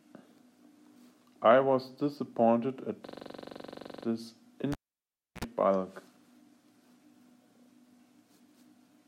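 From 3.07 to 4.05 s there is a system hang loop. The computer stalled while the sound hardware kept replaying its ring buffer. One 42.7 ms slice repeats exactly, 23.4 times per second. That fits a 2048-sample buffer. It sounds like a machine-gun stutter.

At 4.72 s the cable is pulled and plugged in. A pop cuts the sound. Near silence follows for 0.67 s. Then comes a 67 ms burst of 60 Hz mains buzz as the tip touches. A second pop at 5.45 s brings the sound back.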